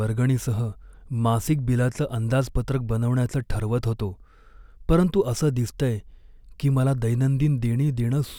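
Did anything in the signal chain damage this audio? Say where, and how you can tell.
No damage anywhere in the chain.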